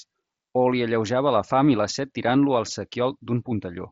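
Nothing goes wrong anywhere in this speech, which comes over a Bluetooth mSBC headset link, so the sound tops out at about 7.8 kHz and carries a faint grain on the louder moments, as that wideband codec does.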